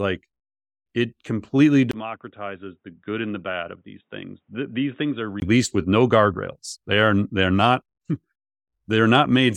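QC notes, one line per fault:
1.91–5.42 s, input switched to a poorer device: after a 20 ms gap the speech drops about 10 dB and turns dull and boxy, with nothing above 3.8 kHz and a faint new noise floor about 50 dB down, likely from a narrower-band microphone.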